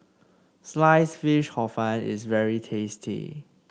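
The speech comes through a WebRTC call path, with Opus coding the audio and the top of the spectrum ending around 12 kHz, and no technical fault can be heard anywhere in it.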